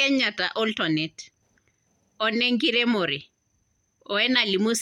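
The speech signal holds steady across the whole recording, with no dropouts, level jumps, distortion or timing disturbances to be heard anywhere.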